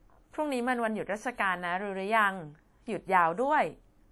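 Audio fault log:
throughout, WMA compression: speech rings and washes, with hiss breathing along with it. The likely cause is a transform codec at about 48 kbps. Spectrogram shows smeared blocks, empty above 20.1 kHz.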